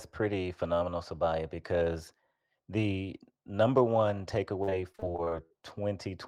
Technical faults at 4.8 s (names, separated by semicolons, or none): repeated packet loss (robotic sound)